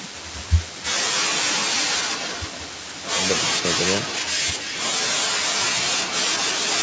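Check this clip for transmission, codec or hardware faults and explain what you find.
There's an echo leak in this speech. From 1.2 to 3.04 s, 3.42 to 4.84 s and 5.16 to 6.82 s, a copy trails about 314 ms behind, fairly loud, weaker in the middle stretch, likely a far-end canceller missing its loudspeaker pickup.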